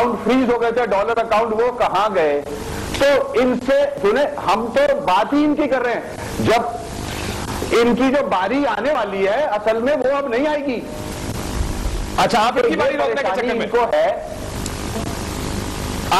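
At 3.98, 8.95 and 13.93 s the sound skips: a few tens of milliseconds vanish and the edges butt together. The even five-second spacing points to audio missing between chunks, likely from a recorder dropping a sliver each time it starts a new block.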